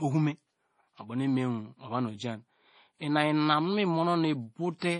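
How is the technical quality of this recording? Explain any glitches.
The recording is heavily degraded by lossy coding for its whole length. Throughout the speech, the sound is watery and swirly, with nothing above 10.5 kHz. That points to likely MP3 compression at a low bitrate, consistent with about 32 kbps: the encoder cuts the treble and drops weak frequency components, which flicker between frames.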